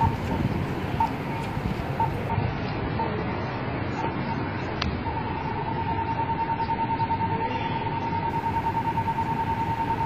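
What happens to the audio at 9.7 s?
Nothing goes wrong at 9.7 s: the audio carries on intact through that moment, with no dropout, click or other fault to be heard.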